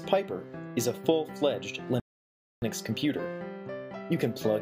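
At 2.00 s the audio drops into silence for about 0.62 s, then picks up at 2.62 s exactly where it left off. That's a rebuffering stall: the player ran dry of downloaded data and waited for more. Nothing gets skipped, but the clip gains that 622 ms gap.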